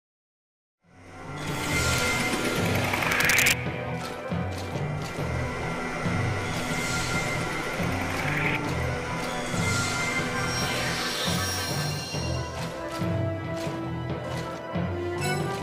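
A sum or gain stage exceeds its integer ceiling and wraps to the opposite sign instead of being limited, causing integer overflow. A single violent crack sounds at 1.98 s, as the level peaks near the end of the fade-in, and a burst of cracking runs from 3.12 to 3.53 s, where peaks push about 4 dB past the limit.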